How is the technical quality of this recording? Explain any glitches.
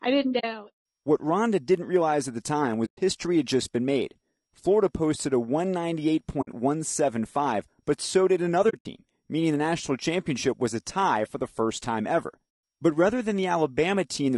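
The recording has clear technical problems: constant codec damage and five short dropouts.

Low-delay AAC compression, likely AAC-ELD, runs through the whole clip. This call codec uses very short frames, so it cannot separate the speech's pitch harmonics cleanly and has few bits for each frame. At a low rate, one that fits roughly 32 kbps, the damage is plainly audible. The speech sounds rough and grainy, with noise filling the gaps between harmonics and a thin, artificial-sounding top band.

AAC frame loss with muting occurs five times. In each case, whole frames never arrived and the decoder replaced their contents with silence. The overlapping windows then fade the sound out and back in, so each gap is a soft-edged hole. The first falls after "I didn't" at 0.39 to 0.44 s, lasting 40 ms. The next two run from 2.85 to 2.99 s (120 ms) and from 6.41 to 6.48 s (60 ms). Between "but so did" and "meaning the national championship", 120 ms of silence is scattered across 8.69 to 8.86 s, and its longest stretch is about 70 ms. 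The last and longest follows "the first time ever", running from 12.49 to 12.63 s for 140 ms.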